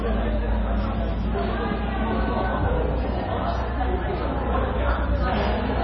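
Throughout, the audio's treble stops abruptly at about 5.8 kHz, and what remains sounds watery and swirling, with smeared attacks. That points to heavy MP3 compression, likely near 24 kbps. Unlike a plain low-pass filter, weak frequency components flicker on and off between frames.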